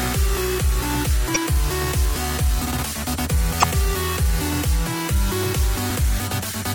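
Throughout, the sound is watery and swirly with a dulled top end and smeared attacks, likely MP3 compression at a low rate fitting about 64 kbps. Damaged data in the compressed stream makes the decoder lose frame sync briefly, giving short glitches at 1.32–1.37 s, 3.59–3.64 s and 5.87–5.90 s.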